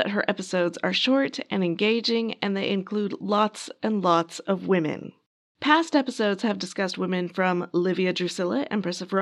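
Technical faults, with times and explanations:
0.33–4.29 s, Bluetooth SBC bit pool drop: the link congested and the encoder cut its bit budget, consistent with roughly 99 kbps. Starved upper sub-bands dull the treble and gritty noise rises until "of women".
5.64–6.81 s, Bluetooth SBC bit pool drop: just after "of women" the bit pool falls again, coarsening quantisation. The top end dulls and grit returns until recovery before "women from".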